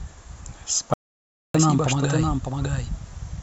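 Doubled audio track, throughout the clip: a second full-band copy of the speech trails the original by roughly 0.7 s, sitting about 5 dB lower. It carries no decay or room colouring, so it reads as a flat, stuttering repeat rather than an echo. The cause is likely the same signal being captured twice, once through a slower path, or an edit leaving two copies out of alignment.

Audio dropout to silence, 0.94 to 1.55 s: the speech cuts out abruptly and about 0.61 s of it is lost, replaced by dead digital silence with no trace of room tone before the sound returns mid-flow. This is likely the input signal dropping away, through a disconnected device, a failed link or a stray mute, while the recorder kept writing silence.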